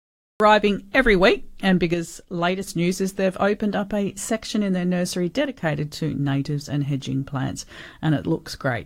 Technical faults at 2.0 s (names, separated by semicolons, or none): one channel drops out